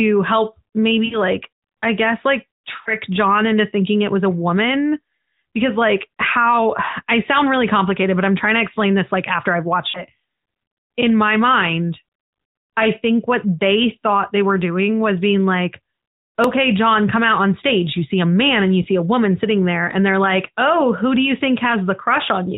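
At 1.06 to 1.18 s the speech blurs and dips. These are lost AMR speech frames. Radio errors corrupted frames, so the decoder repeated its last good pitch and vocal tract settings at falling gain. This gap lasts about 60 ms, which fits three lost 20 ms frames. The sound smears briefly, then recovers a little rough. A 40 ms gap follows at 2.82 to 2.94 s. Another comes at 9.90 to 10.05 s.

At 16.44 s a tiny click is heard. This is a repeated buffer. Fresh audio arrived late, so the device replayed its last buffer once more. The repeat lasts about 1.45 ms, which fits a 64-sample buffer. Almost no audio is lost. The hard join gives a click, not a stutter.

At 18.82 to 18.86 s a single lost AMR frame of about 20 ms gives a short warble. The speech stays band-limited to 4 kHz throughout, as the AMR narrowband codec requires. Its light coding texture points to about 12.2 kbps.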